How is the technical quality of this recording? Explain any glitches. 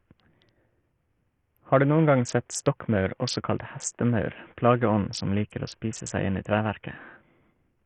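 The quality is poor throughout. The speech sounds gritty, and its treble flickers and drops out for the whole clip. That points to heavy Bluetooth SBC compression, likely at a very low bitrate, around 48 kbps. SBC splits the sound into a few wide bands. With so few bits, the top bands get little or nothing. The lower bands are coarsely quantised, which leaves rough noise and aliasing on the speech.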